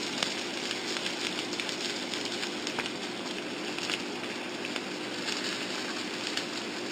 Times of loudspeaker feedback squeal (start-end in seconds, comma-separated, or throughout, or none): none